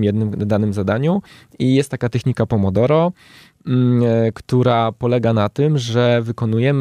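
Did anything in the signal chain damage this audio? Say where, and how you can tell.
No, no faults are audible.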